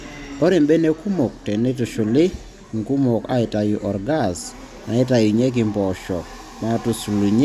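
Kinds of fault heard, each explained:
No kinds of fault are heard in this speech clip.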